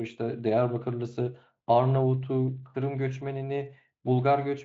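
No technical faults can be heard in this speech; it shows the traits of a Speex encoding at a high-quality setting, with any coding damage faint at most and nothing present above about 7.7 kHz.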